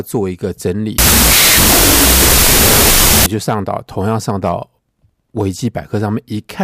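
From 0.98 s to 3.26 s the speech collapses into loud, harsh noise, with the original only faintly audible underneath, dragged down to half speed and an octave lower in pitch. This is a wrong sample width fault. The sound points to 32-bit float data being read as 16-bit integers: each stored sample is split into two values, doubling their count and halving playback speed, while half of those values come from low mantissa bytes that carry no signal.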